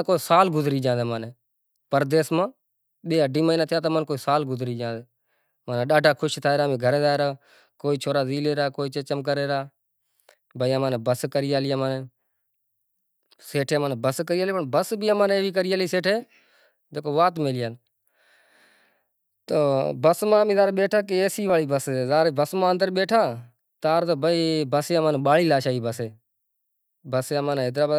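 A dropped buffer (overrun) is the likely cause of two brief jumps in the sound, at 17.37 s and 21.50 s. At each point the speech jumps forward abruptly rather than pausing, because a few milliseconds of audio, around 5 ms, went missing and the samples on either side were butted together. The recording software seems to have fallen behind, so the capture hardware overwrote that stretch before it was read. The result is a short skip with a discontinuity in the voice.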